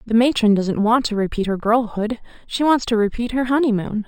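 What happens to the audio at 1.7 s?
At 1.7 s the speech has imaging from linear upsampling, present throughout. Straight-line interpolation dulls the top of the band and leaves a mirrored copy at 6 to 12 kHz, about 30 dB down, consistent with 12 kHz audio raised to 48 kHz. It adds faint metallic shimmer to sibilants.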